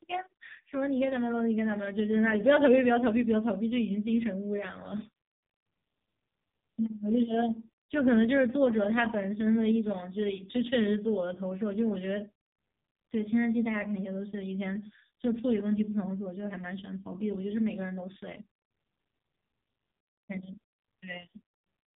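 From start to finish, the speech carries heavy damage from the AMR narrowband mobile codec, the AMR-NB speech coder used on 2G and 3G calls. Nothing above about 3.7 kHz survives, so the sound is dull and boxy. The coder rebuilds the voice from a vocal-tract model fed by sparse pulses. At a rate that fits about 5.15 kbps, very few bits are left for detail. The result is buzzy and synthetic throughout.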